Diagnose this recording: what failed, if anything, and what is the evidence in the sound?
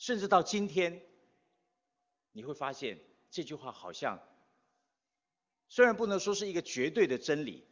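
Nothing failed: the speech shows a call's microphone processing, with the lowest bass trimmed and nothing above 8 kHz, and an AMR wideband (HD Voice) codec at a rate that fits its top 23.85 kbit/s mode, both working as intended.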